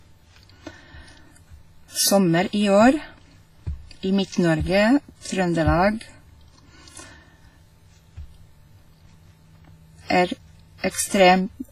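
Throughout the speech there is a ringing, washy quality with hiss that swells and fades alongside the voice, and nothing reaches above 15.4 kHz. This points to WMA compression, likely at a low bitrate around 24 kbps. Unlike steady background hiss, this noise breathes with the signal.

From 5.21 to 5.25 s a short hiss spreads about 46 ms ahead of a sharp attack, leaving it soft and smeared. This is pre-echo: the codec spread its block's quantisation noise backward into the quiet moment before the attack. A reverb tail, by contrast, would follow the attack rather than precede it.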